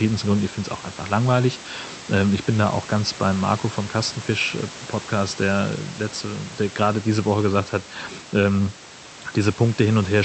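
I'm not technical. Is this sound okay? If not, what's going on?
Yes, this sound is okay: nothing here is going wrong.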